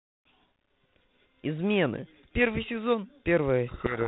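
From 3.68 s to the end at 4.07 s there is a codec payload misread. The two ends disagree on the bit order of the G.726 code words, so the decoder takes each ADPCM difference value with its bits reversed and rebuilds the wrong waveform. The speech, up to that point carried at 32 kbit/s with only light coding hiss and nothing above 4 kHz, is abruptly buried in harsh, grinding distortion that lasts until the clip ends.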